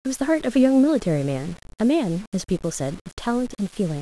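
Throughout the speech, a grainy distortion rides on the signal and shifts with it. Quiet passages turn gritty. This is low bit depth without dither, likely rounding to about 6 bits. The error tracks the signal, sitting roughly 25 dB below it.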